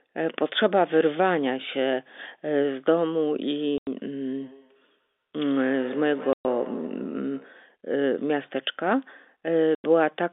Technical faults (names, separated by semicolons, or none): packet loss filled with silence; feedback echo between two devices